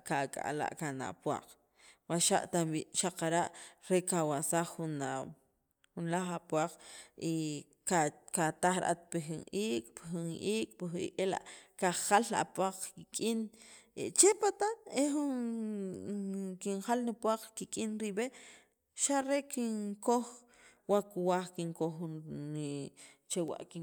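No technical faults can be heard anywhere in this speech recording. Nothing in the sound points to a problem at any moment.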